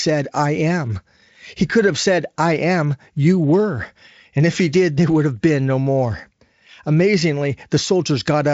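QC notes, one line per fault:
No fault to note.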